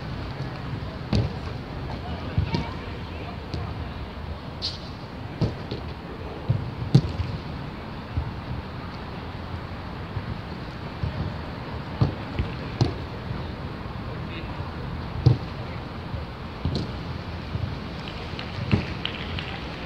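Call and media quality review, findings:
No call or media quality faults found in this recording.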